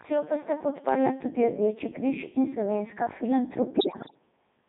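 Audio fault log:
throughout Codec 2 vocoder. Speech is rebuilt from pitch, voicing and a spectral envelope at 3.2 kbit/s, so it sounds buzzy and robotic, confined to 150 Hz to 3.7 kHz.
3.78–4.19 s Bit errors on digital voice radio. Flipped bits, roughly 7 percent, corrupt whole vocoder frames, so pitch, level and tone jump into warbling, bleeping gibberish.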